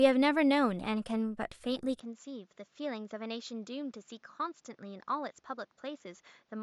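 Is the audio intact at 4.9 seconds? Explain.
No. From 2.00 s to the end, the speech has likely come through an input switched to a poorer device. Nothing passes above 7.3 kHz, the level drops by about 10 dB, and a new background noise sits roughly 40 dB down. Because band, level and noise all change at one instant with no gap, it is not a plain filter or gain change.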